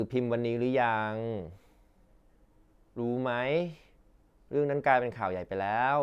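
Nothing goes wrong anywhere in this bit of speech, so there's no fault to point to.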